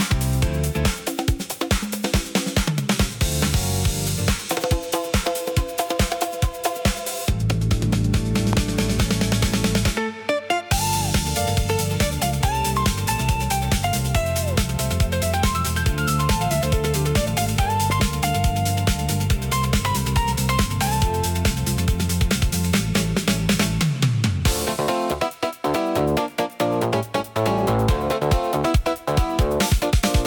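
A loud pop hits at 8.53 to 8.55 s, standing well above the sound. Another follows at 17.90 to 18.02 s as a quick double pop, a little quieter. The likely cause is a sudden voltage step from a plug, switch or static. The sound continues underneath.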